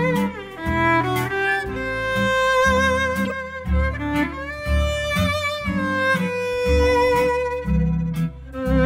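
A corrupt frame decoded at 3.25 to 3.32 s. A short run of compressed frames, which fits about three, arrived with flipped bits and was played anyway. Misread codes threw energy to wrong frequencies, giving a brief chirping burst peaking near -15 dBFS.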